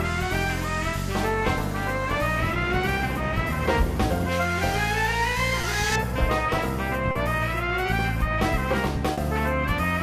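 Short concealed packet loss occurs at 5.61–5.65, 7.11–7.17 and 9.13–9.19 s. Lost audio of 20, 40 and 40 ms was filled by extending the preceding sound, leaving brief smears.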